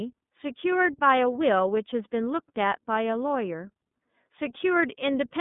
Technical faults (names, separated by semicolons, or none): iLBC codec